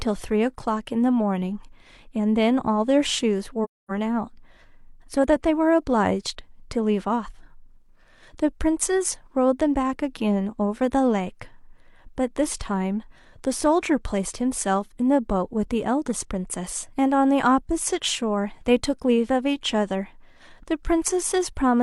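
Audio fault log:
3.64–3.91 s, AAC frame loss with muting: a run of AAC frames never reached the decoder, which filled their spectrum with zeros in place of the missing data, so about 256 ms of speech is simply absent. The gap points to roughly six consecutive lost frames. Because each frame overlaps its neighbours, the sound fades down into the silence and back up out of it, leaving a soft-edged hole.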